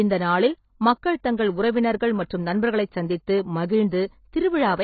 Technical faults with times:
0.00-4.84 AAC compression

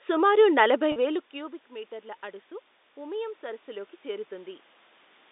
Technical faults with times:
0.92-0.96 packet loss with pitch repetition
2.96-4.61 automatic gain rising

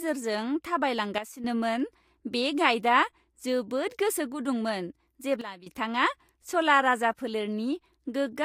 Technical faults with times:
1.18-1.44 sudden gain jump
5.41-5.66 sudden gain jump

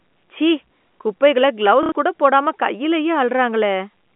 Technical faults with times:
1.83-1.92 packet loss with last packet repeated

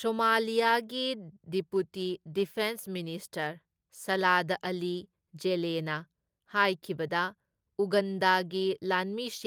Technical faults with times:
none

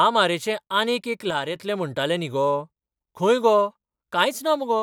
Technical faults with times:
1.30-1.56 one channel drops out

